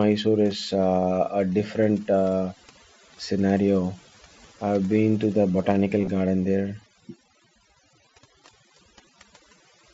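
Right from the start there's overdone noise removal. The denoiser was pushed so hard that any band sitting near its noise estimate gets pulled down or switched off, and quiet bits of the speech go with it. The background drops and breaks up into little twinkly specks.

Around 6.01 to 6.07 s you can hear concealed Bluetooth headset packet loss. About 45 ms of audio went missing, scattered across 60 ms, with the longest gap 22.5 ms. That fits a handful of lost frames. The receiver filled the holes by repeating the closest-matching piece of recent waveform, so there's a brief buzzy, held tone and a slight warble as the real sound comes back. It sits on top of the light graininess of the mSBC headset link.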